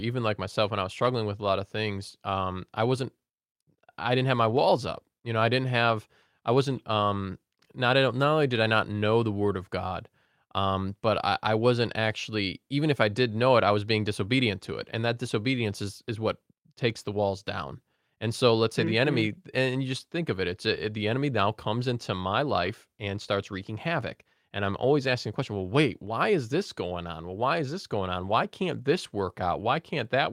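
At 15.59 s, 22.65–22.71 s, 25.07 s and 28.27 s, the speech turns briefly rough and noisy with no gap: each is a lost packet (two at 22.65–22.71 s) rebuilt from error correction, played from a low-bitrate backup copy. The spectrogram shows smeared, grainier energy there, while the waveform stays continuous.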